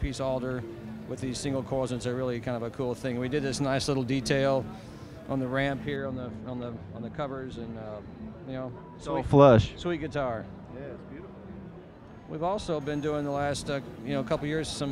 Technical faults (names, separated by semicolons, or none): de-emphasis applied wrongly